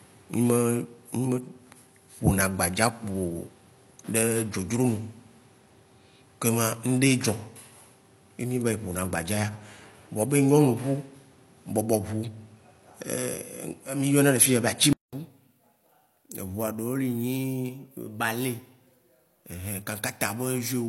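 It's a speech clip, and for the first 15.13 seconds it sounds like the input was likely switched to a poorer device, since nothing gets through above about 11.3 kHz and there's a distinct background noise sitting roughly 35 dB under the speech. At 15.13 s there's a short 200 ms gap, then the sound opens up as the better input takes over, with the level shifting by roughly 5 dB at the change.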